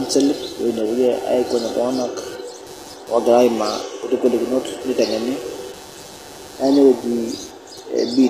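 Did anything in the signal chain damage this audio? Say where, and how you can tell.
Yes. The damage starts in the analogue wiring. A buzzing, scratchy pulse runs under the speech for the whole clip. It repeats around 150 times a second and sits well below the speech, roughly 25 dB down. Its texture shifts on its own schedule, not with the speech. That is computer activity noise. Load changes in the processor, graphics card or mouse disturb a ground that the audio circuit shares, and those disturbances leak into the signal.

The second fault sits at the codec stage. The treble sounds synthetic. S sounds come out gritty and metallic throughout, and the damage is plainly audible. Nothing is present above 14.9 kHz. The likely cause is HE-AAC compression at a low bitrate, which fits about 24 kbps. The codec keeps only the lower spectrum and rebuilds the top by copying lower bands upward. The copied harmonics do not line up with the real ones.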